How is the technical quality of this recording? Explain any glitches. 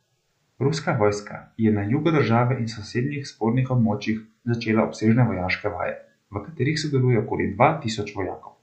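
No technical glitches can be heard anywhere in this speech recording. There is nothing here that needs explaining.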